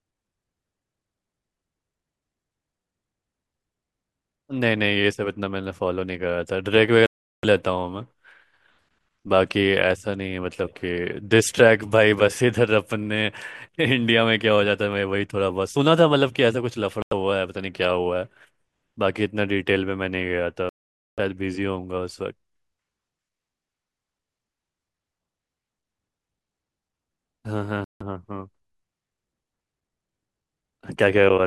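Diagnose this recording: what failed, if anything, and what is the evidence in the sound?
The failure is at the playback stage, on the wireless link, and is most likely a Bluetooth dropout. The speech cuts to silence four times: 7.06 to 7.45 s (about 0.37 s), 17.02 to 17.13 s (about 90 ms), 20.69 to 21.19 s (about 0.49 s), and 27.84 to 28.02 s (about 0.16 s). Late packets were discarded rather than waited for, so the sound resumes where it would have been, with that stretch simply gone. A local buffer underrun would instead stall and pick up where it stopped.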